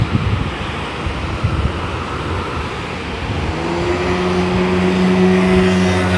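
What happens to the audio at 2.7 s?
At 2.7 s, as everywhere in the clip, the sound runs fast and sits noticeably high, with everything hurried along at one and a half times its natural pace and raised by about seven semitones, close to a musical fifth. This is a wrong sample rate fault: the samples are played back faster than they were captured, with no conversion, so speed and pitch rise together. A 1.5 ratio fits audio recorded at 16 kHz being played at 24 kHz.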